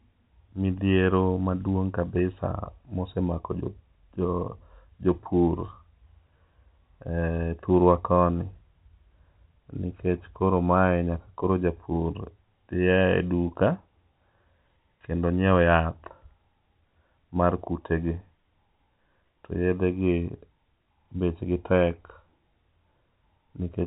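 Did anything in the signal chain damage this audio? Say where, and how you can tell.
No, nothing stood out as damage on listening; the speech carries the narrow telephone band of its G.711 coding, with nothing above about 3.9 kHz.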